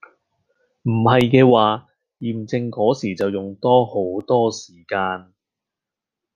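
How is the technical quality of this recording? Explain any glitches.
The recording has one clear technical fault, a run of periodic USB or driver dropouts. From 0.21 s to 4.21 s there is a gap about once every 1.0 s, about five in all. Each time, roughly a millisecond of audio is lost and replaced by silence, likely because a background task blocks the USB bus or audio driver on a fixed schedule. Where a gap falls on the speech, it is heard as an evenly spaced tick.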